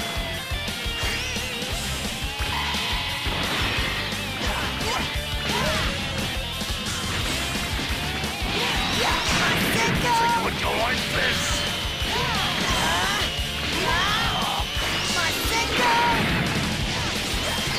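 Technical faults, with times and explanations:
Nothing here sounds wrong to the ear, so there's no technical fault to list for this clip.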